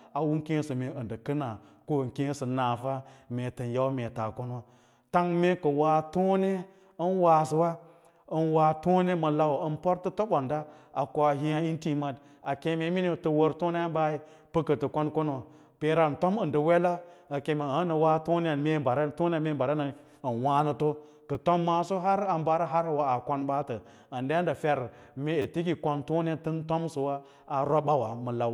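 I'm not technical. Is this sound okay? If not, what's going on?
No, there are three brief glitches from a repeated buffer. When fresh audio doesn't reach the playback device in time, it replays the last small chunk instead. The repeated chunk here is very short, which fits a 10 ms buffer, so each one sounds like a click or tiny buzz rather than an obvious stutter. It happens once at 12.45 s and once at 21.35 s. From 25.42 to 25.45 s the same chunk plays four times, making a slightly longer buzz. No speech appears to be lost.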